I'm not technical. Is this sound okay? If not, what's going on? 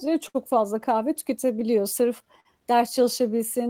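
No. The clip has three related timing faults.

The first is clock drift between sender and receiver. The sending device's clock runs roughly 5 percent slower than the receiving one, so audio arrives a little more slowly than it is played. To cope, the receiver must keep stretching things out. This affects the whole clip and is behind the repeated timing corrections.

The second is a short stall from a late packet, which happens twice: from 0.28 to 0.36 s, and again from 2.40 to 2.47 s. Each time, a chunk of audio arrived late and the receiver had nothing ready to play, so it held the last sound for about 60 ms and then about 50 ms until the chunk came in. Nothing is lost, but the sound briefly sticks or drags, sometimes with a faint buzz.

The third is repeated timing corrections, from 1.45 to 3.39 s. Here the receiver keeps repeating tiny slivers of audio to make up for the slow sender, adding around 40 ms in total. 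The effect is playback running about 2 percent slow through that stretch, with small, unevenly spaced edits.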